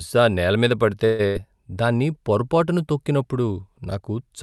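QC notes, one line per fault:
1.05–1.21 s, call audio freeze: packet delivery likely stalled and the jitter buffer ran dry, so the receiver stretched the last sound into a fading buzz or hiss for about 135 ms. Playback then resumed where it stopped, adding a gap while losing nothing.
1.27–1.37 s, burst of packet loss: roughly 80 ms of packets never arrived in time, so the receiver held the preceding sound and turned it down before jumping ahead. The audio picks up further on, with that stretch missing rather than delayed.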